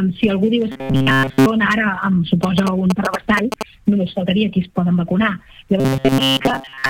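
From 0.72 to 1.46 s and again from 5.80 to 6.89 s, robotic sound from repeated short buffers imposes a rigid metallic 134 Hz buzz; most audio is skipped, likely from looping segments of about 7.5 ms. Between 2.43 and 3.63 s, GSM signalling bursts add galloping ticks and 217 Hz buzzing, about 5 dB below the signal, as rectified radio pulses.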